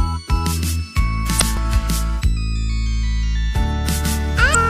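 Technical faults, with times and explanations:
1.37–1.42 s and 4.51–4.56 s, damaged data in a compressed stream: brief glitches as the decoder misreads corrupt frames and resyncs. These are irregular and garbled, not clean periodic skips.
1.57 s and 3.56 s, audio missing between chunks: tiny skips two seconds apart, likely a very short piece lost at 2-second chunk boundaries. The sound is spliced together without a gap of silence.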